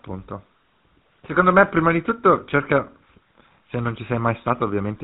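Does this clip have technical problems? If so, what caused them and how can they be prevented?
Yes. The speech carries GSM full-rate codec damage from start to finish, with a plainly audible buzzy, gravelly roughness, which fits the 13 kbps full-rate GSM stream. The codec rebuilds the voice from a vocal-tract model driven by a regular pulse train that keeps only every third excitation sample, so the voice turns grainy and nothing survives above 4 kHz. A plain telephone low-pass filter would sound muffled but smooth. This codec adds the rasp. To prevent it, route the call over a wideband codec such as AMR-WB, EVS or Opus instead of GSM full rate.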